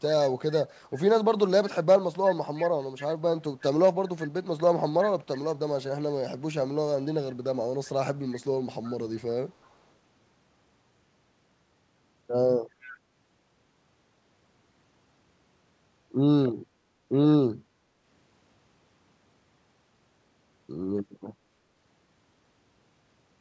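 Faint delayed repeats of the speech, an echo leak, turn up at 2.56–3.08, 5.0–5.38, 8.83–8.92, 9.28–9.76 and 12.81–12.94 s. They trail the original by about 0.36 s and sit roughly 15 to 35 dB down. The likely cause is a far-end echo canceller letting loudspeaker pickup through. On a spectrogram they show as weak copies of earlier harmonic patterns, shifted later in time and stopping below 8 kHz like the rest of the call audio.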